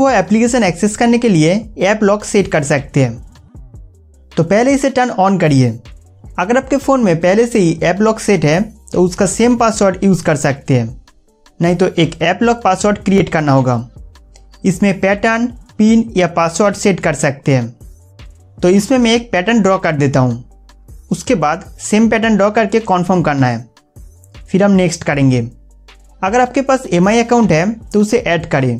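At 13.18 to 13.20 s a brief Bluetooth stutter appears. One lost packet most likely left the receiver replaying its last 20 ms slice once, giving a short doubled blip. Unlike a silent dropout, the gap is filled with repeated sound, and playback then jumps ahead.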